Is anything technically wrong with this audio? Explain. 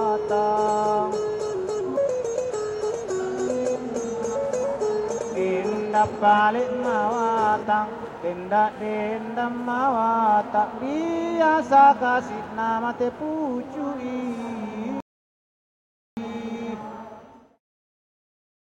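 Yes. From 15.00 to 16.17 s there is an audio dropout to silence. The input was likely lost, so only silence was written. About 1.17 s of sound vanishes into dead silence.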